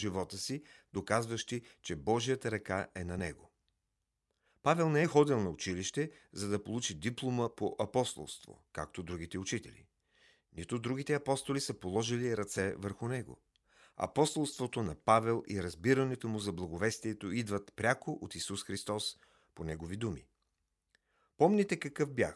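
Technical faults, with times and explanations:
No technical faults are audible anywhere in this speech recording.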